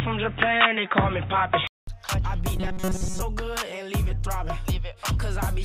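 Input switched to a poorer device, from 0.0 to 1.87 s: a narrower band, giving a dull, boxy tone with its own faint background noise. A silence of 200 ms and a level jump of about 5 dB at the switch point to a likely change of microphone. Robotic sound from repeated short buffers, from 2.57 to 3.22 s: a rigid, metallic buzz at 188 Hz, which fits a buffer of about 5.3 ms being replayed. Most of the audio in that stretch is skipped and likely filled with these repeats.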